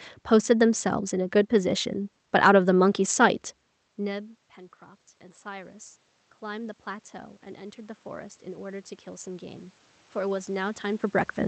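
It's a speech clip, and the issue is automatic gain rising. Around 3.5 s the talker seems to drop back from the mic, and the level at the input falls by about 23 dB. The AGC then slowly pulls it up, about 4 dB between 3.99 and 5.85 s, then about 9 dB more from 6.4 to 11.11 s. The voice and the room noise swell together as the gain climbs.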